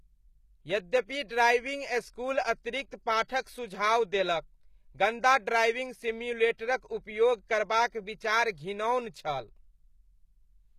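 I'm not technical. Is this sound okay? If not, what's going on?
No. The speech likely has plainly audible HE-AAC compression, where the upper treble is synthesised from lower frequencies rather than kept. Pre-echo appears at 3.28 s and 6.58 s: a brief hiss, lasting about 14 and 17 ms, smears in just before a sharp attack.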